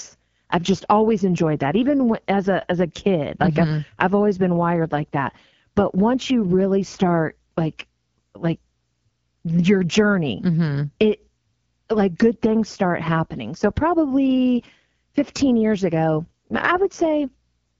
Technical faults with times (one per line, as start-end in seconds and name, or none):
0.00-17.79 AMR wideband (HD Voice) codec